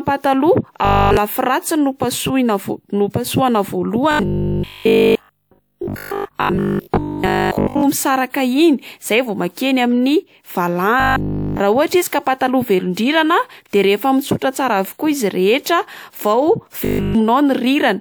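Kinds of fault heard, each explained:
Robotic sound from repeated short buffers: the speech turns into a stiff metallic buzz at 50 Hz, likely from audio arriving too seldom, so a roughly 20 ms stretch keeps replaying. It's at 0.85 s before "lafy ratsiny no", 4.11 to 7.83 s (mostly repeats), 11.0 s and 16.85 s.
Pre-echo: right before "de rehefa" at 13.69 s, a 39 ms hiss runs ahead of a sharp attack. The codec spread its quantisation noise across the whole block, so noise sized for the loud onset spills into the quiet moment before it and the attack sounds smeared.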